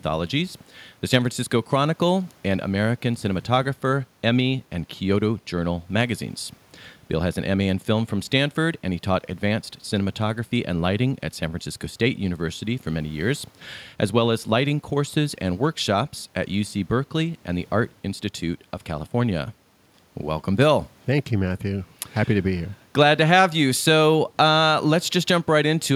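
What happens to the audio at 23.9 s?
Nothing goes wrong at 23.9 s; the speech there plays through intact, with no dropout, click or distortion.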